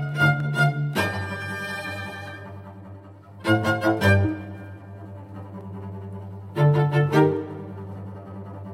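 Sharp single clicks cut through the music at 0.40, 1.42, 2.28 and 5.61 s, likely dropped samples, each losing a fraction of a millisecond so the waveform jumps ahead. Unlike a dropout, no audible gap or silence follows, just a thin instantaneous tick.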